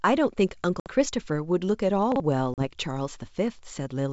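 At 0.80 s, packet loss on an ADPCM call cuts a hard-edged 60 ms hole, roughly a few packets' worth. The decoder's predictor and step size have drifted from the sender's, so the speech returns slightly distorted, settling by 0.89 s. A plain dropout would resume cleanly.

At 2.12 s, chunks out of order make a jumbled moment: a 40 ms chunk plays one chunk late, leaving three hard joins. Nothing is missing, unlike a loss.

At 2.54 s, a second 40 ms loss of a couple of packets again brings a slightly distorted recovery, steadying by 2.69 s. The wideband G.722 coding beneath, which fits 64 kbit/s, keeps its faint upper-band hiss throughout.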